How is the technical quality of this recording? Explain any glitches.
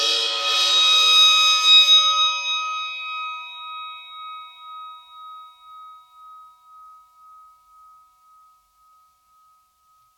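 No technical faults can be heard in this music recording. There are no glitches to explain at any point in the clip.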